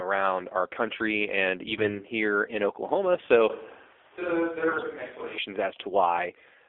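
From start to finish the speech sounds buzzy, boxed-in and synthetic, confined to roughly 300 Hz to 3.5 kHz. This is the AMR narrowband mobile codec at 7.4 kbps, whose pulse-driven vocal-tract model leaves plainly audible coding damage at that low rate.

Between 1.72 and 2.03 s, after "our country and" and before "here in", the voice turns hoarse, scratchy and gargly while keeping its pitch and level. These are AMR bit errors: a few percent of the weakly protected bits arrived flipped, misplacing pulses across fourteen frames.

From 3.50 to 5.38 s the sound abruptly becomes hollow and roomy, thinner in the bass, about 10 dB quieter, with background noise only about 25 dB below the speech. It returns just as suddenly. The likely cause is a switch to a distant microphone.

Within that stretch, from 4.68 to 4.84 s, the AMR bit errors return more harshly. Around a tenth of the bits are corrupted here, so those few frames turn into a coarser, rasping gargle.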